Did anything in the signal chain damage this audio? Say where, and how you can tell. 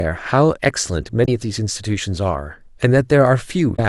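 Yes. The codec stage shows damaged data in a compressed stream: brief glitches at 1.22–1.28 s and 3.72–3.79 s. Corrupt frames make the decoder lose sync and hunt for the next header.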